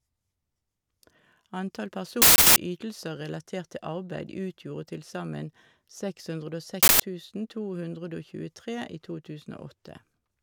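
Uninitialised buffer faults break into this speech clip at 2.22 s for about 0.34 s and again at 6.83 s for about 0.17 s. Each time, a block of audio was sent to playback before any samples had been written into it, so stale memory contents came out instead. Both are heard as an abrupt, harsh burst of loud digital noise. The lengths fit blocks of 16384 and 8192 samples.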